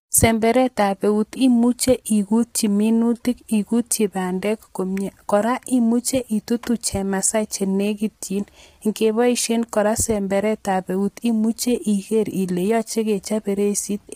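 From start to finish the speech sounds rough and grainy, with a noisy haze filling the gaps between voice harmonics and a thin, synthetic top band. This is likely low-delay AAC compression, whose short frames blur pitch detail, damage consistent with about 24 kbps.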